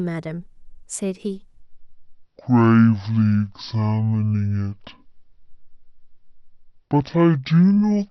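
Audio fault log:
1.62 to 8.10 s, section at the wrong speed: from this point to the end the speech abruptly runs at 0.515x, so it drags and drops roughly ten semitones. Pitch and pace sink together, which likely points to that stretch being played against the wrong clock.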